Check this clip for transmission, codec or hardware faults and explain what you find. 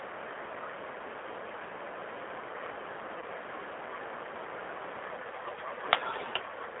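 Two faults are present: G.729 codec coloring across the whole speech clip, and one packet-loss gap concealed by the codec.

G.729 codec, throughout: the line passes only about 250 Hz to 3.5 kHz, and the sound fits an 8 kbit/s G.729A coder that rebuilds speech from a vocal tract filter, pitch predictor and sparse pulses. The damage is plainly audible as a slightly rough, synthetic texture.

VoIP packet loss concealed by the speech codec, 3.19 to 3.24 s: about 30 ms of audio went missing, which fits a single lost packet. The decoder extended its last pitch and filter state with falling gain, so the speech briefly turns into a buzzy tone or coloured noise that fades before recovering.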